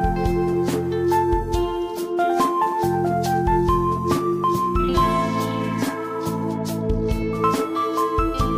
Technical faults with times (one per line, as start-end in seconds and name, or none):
none